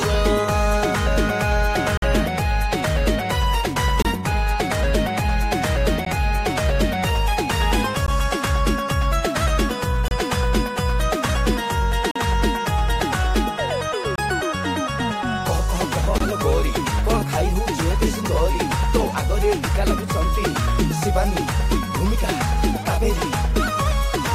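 Gaps between stream segments occur at 1.97–2.02, 4.02–4.05, 6.05, 8.06, 10.08–10.11, 12.11–12.16, 14.16–14.18 and 16.18–16.21 s. Each sits at a boundary between 2-second segments whose timestamps leave a gap. The player fills that gap with silence, so the sound breaks off abruptly for 14 to 49 ms and resumes with a hard edge. No audio is lost.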